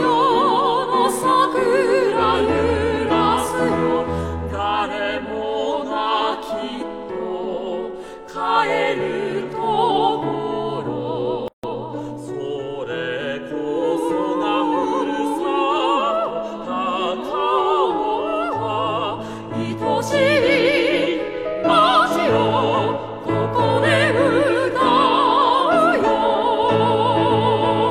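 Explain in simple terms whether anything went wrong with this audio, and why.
A gap at a join of encoded pieces appears at 11.48 s: the sound cuts out for about 160 milliseconds and then resumes where it stopped. The audio was encoded in separate pieces, and the encoder's silent lead-in and end padding were left in at the join.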